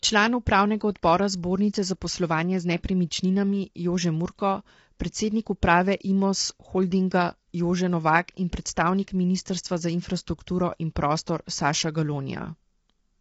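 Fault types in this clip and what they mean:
Low-delay AAC compression: speech sounds rough and grainy, with noise between harmonics and nothing above 7.8 kHz, likely from AAC-ELD's short frames at a bitrate suggesting about 24 kbps.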